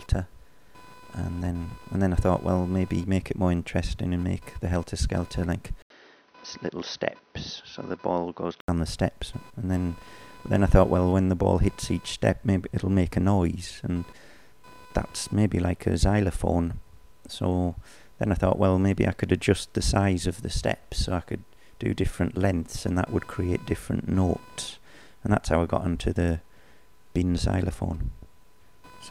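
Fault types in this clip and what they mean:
Computer activity noise: a faint buzzing chirp, roughly 500 pulses per second and around 30 dB below the sound, runs through the whole clip. Its rise and fall follow the computer's processor, graphics or mouse load shifting the shared ground of the audio circuit, not anything in the sound itself. That independence from the programme is what separates it from steady mains hum or from distortion, which would track the signal.
Input switched to a poorer device: from 5.82 to 8.68 s the sound turns dull and boxy, with nothing above 6.2 kHz, a drop of roughly 5 dB and a new noise floor about 35 dB down. A silence of 80 ms marks the switch. The likely cause is the system moving its input to another microphone or a headset's call profile. Unlike a simple low-pass filter, the tone, level and background noise all change together, then clear again.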